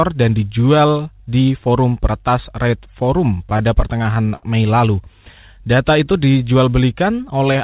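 Repeated stalls (stutter) run from 3.5 to 4.45 s: packets arrived late, so the jitter buffer emptied nine times. The receiver stretched the last sound to cover about 165 ms, with the longest gap about 70 ms. Nothing is lost, but the speech catches and drags.

A jitter buffer slow-down follows from 5.61 to 6.39 s. With its reserve low, the receiver repeated single pitch periods to rebuild it, adding about 62 ms. The speech plays at 93% speed at unchanged pitch, with drawn-out sounds, all within a band that stops at 4 kHz.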